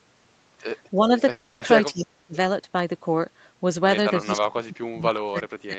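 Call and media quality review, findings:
Speech suppressed in double talk, 0.96–1.11 s: brief, shallow level dip, on the order of a few dB. Likely the echo canceller mistaking near-end speech for loudspeaker echo while both sides talked, attenuating the talker along with the echo.

Speech suppressed in double talk, 1.92–2.35 s: near-total cut, roughly 40 dB down, lasting several hundred ms. Same mechanism: the canceller cannot separate talker from echo during overlap, so it ducks everything, likely at the suppression stage.

Speech suppressed in double talk, 4.21 s to end of clip: deep attenuation, around 30 dB. Points to prolonged double talk with the echo suppressor holding gain down, likely through the remainder of the overlap.

Call audio freeze, 1.31–1.63 s: 300 ms of synthetic continuation, a fading buzz or hiss extending the preceding sound, no silence. Likely a jitter buffer underrun from delayed packets. 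Playback resumes where it stopped, adding 300 ms of delay without losing content.

Band limit at 8 kHz is consistent with a wideband Opus call path and its usual coding noise, plus standard microphone high-pass filtering.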